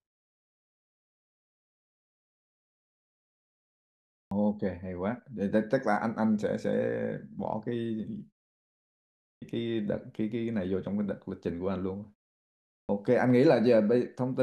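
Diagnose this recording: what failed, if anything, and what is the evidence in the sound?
The output stage fails to wake in time. The playback device powers down or loses lock during silence, and when sound resumes it needs a moment before it passes audio, producing a clipped start after a pause. Speech returns abruptly with its onsets missing at 4.24 s (about 73 ms lost after 4.24 s of silence), 9.33 s (about 88 ms after a 1.09 s pause) and 12.8 s (about 89 ms after a 0.73 s pause). The muting of the pauses themselves costs no speech.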